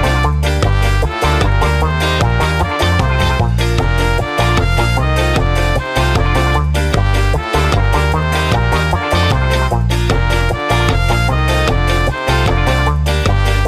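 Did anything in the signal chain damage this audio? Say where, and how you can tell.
No, nothing in the signal chain has left audible damage on this audio. No stage from capture through to playback shows any sign of having altered the sound.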